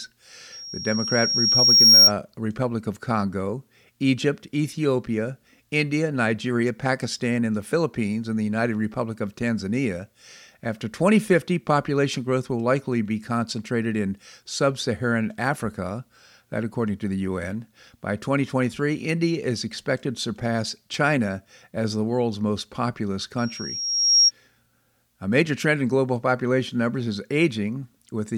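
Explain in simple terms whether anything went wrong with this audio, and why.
Loudspeaker feedback squeal appears twice, from 0.52 to 2.12 s and again from 23.38 to 24.31 s. Each time, a single high whistle at 5.6 kHz swells up over a second or so and ends up much louder than the speech. It happens because the microphone picks up the loudspeaker it is feeding. At that one pitch, the sound comes back stronger on every trip around the loop, so it keeps growing until the loop is broken.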